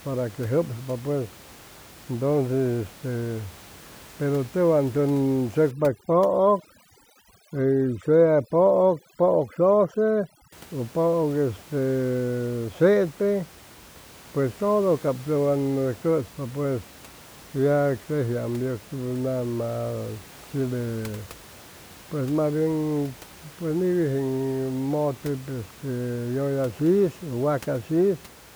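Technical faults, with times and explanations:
5.71 to 10.52 s, overdone noise removal: a noise reduction stage set far too aggressively pulls individual frequency bands down to near zero wherever their level sits close to its noise estimate. With room noise only about 23 dB below the speech, low-level parts of the speech fall into that range and are cut along with the background, leaving the background lowered and broken into twinkling, warbling specks where isolated bands flicker on and off.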